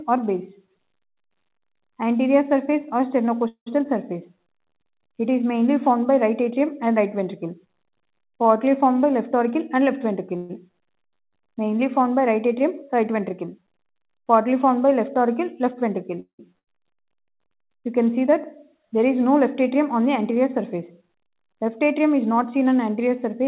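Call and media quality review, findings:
3.48–3.68 s: tail of the sound smeared into a fading buzz, then about 100 ms of silence, then playback resumes intact. Call audio freeze, likely a jitter buffer underrun from late packets. Concealment filled 183 ms and nothing was lost, so latency grew by 183 ms.

10.37–10.51 s: shorter buzzy smear with no silent stretch. Likely the same call audio freeze mechanism. 124 ms concealed and no audio missing, adding 124 ms of delay.

16.20–16.41 s: fading buzz, then about 100 ms of silence. Call audio freeze again, 187 ms filled. Late arrival likely added 187 ms of delay and nothing was lost.

8.98–10.28 s: sound runs hurried at unchanged pitch, about 105% speed. Jitter buffer speed-up. The buffer held more than its target, so the receiver trimmed pitch-period-sized slices repeatedly, around 70 ms in total, to pull latency back down.

16.59–16.69 s: abrupt forward jump with an 84 ms filled join, right after the 16.2 s freeze. 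Skip ahead. Roughly 200 ms of audio discarded, likely from jitter buffer overflow as held-back packets arrived together. This cut about 150 ms of the accumulated delay.

Throughout, the band stops at 4 kHz, which fits a narrowband G.711-type call codec at around 64 kbps.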